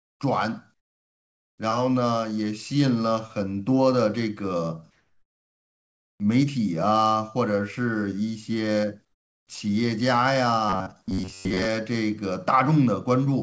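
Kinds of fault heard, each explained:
Comfort noise in place of the background: In the pauses at 0.0 to 0.2 s, 0.74 to 1.58 s, 4.91 to 6.2 s and 9.05 to 9.47 s, the real background is swapped for steady, featureless synthetic hiss, likely from discontinuous transmission with RFC 3389-style comfort noise. Level drops by about 27, 19, 2 and 12 dB respectively. On a spectrogram those gaps show as smooth, evenly textured noise bands; the waveform looks flat and uniform.
Robotic sound from repeated short buffers: From 10.69 to 11.65 s, the speech turns into a rigid metallic buzz at 93.8 Hz. Late-arriving audio was likely covered by looping the last chunk, which fits a buffer of about 10.7 ms. Most of that stretch is repeated material rather than new speech. The spectrogram shows a rigid comb of harmonics at multiples of 93.8 Hz, and the waveform shows identical cycles repeating.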